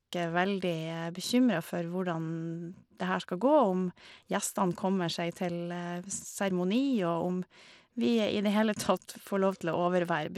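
From start to finish the speech carries plainly audible coding damage, likely Bluetooth SBC compression at a low rate consistent with about 96 kbps. Starved upper sub-bands lose treble detail, and coarse quantisation leaves a gritty, aliased edge on the sound.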